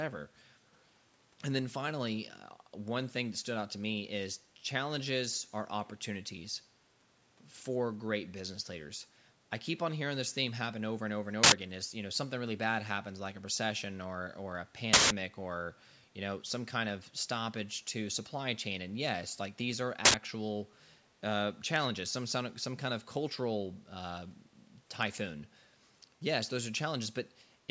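From 0.74 to 0.85 s, an echo leak is the likely cause: a loudspeaker's echo canceller lets through a trace of the talker's own voice, heard as a very faint copy of the speech arriving 471 ms late.

Three uninitialised buffer faults follow, where blocks were played before audio was written into them, so stale memory came out as sound. Each is a sudden, loud burst of digital noise: at 11.44 to 11.52 s and 20.05 to 20.14 s, about 85 ms each, which fits a 4096-sample block, and at 14.93 to 15.10 s, about 171 ms, which fits an 8192-sample block.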